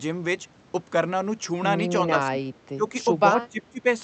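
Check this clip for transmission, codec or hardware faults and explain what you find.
One fault appears, repeated three times: speech suppressed in double talk, at 2.06 to 2.37 s, 2.75 to 2.93 s and 3.35 to 3.86 s. The likely cause is an echo canceller that, with both ends talking, mistook this talker for loudspeaker echo and attenuated everything. The level sinks by roughly 10 dB, then about 15 dB twice, so the speech thins and drops out in fragments. On a waveform the envelope caves in over those spans. A spectrogram shows the harmonics fading or breaking into patches, all below a ceiling near 8 kHz left by the Opus call path.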